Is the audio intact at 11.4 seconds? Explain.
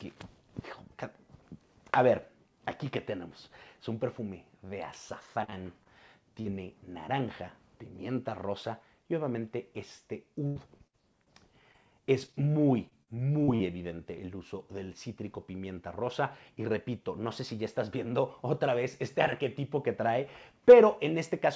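No. At 11.4 s the clip is inside a stretch of repeated packet loss (robotic sound) running from about 10.47 to 13.61 s. Across that span there are 11 separate gaps, the longest about 84 ms, each patched by extending the preceding sound before the next loss arrives. Roughly 360 ms of audio goes missing in total, and the patches give the passage a choppy, robotic quality with pieces dropped out.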